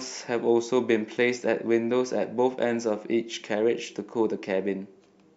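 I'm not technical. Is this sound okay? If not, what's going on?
No. From 0.23 to 5.33 s there's a faint, steady ticking under the speech, roughly every 0.15 seconds. These are clock slip clicks, likely from two devices whose clocks run at slightly different speeds, so a tiny sliver of sound keeps getting dropped or repeated.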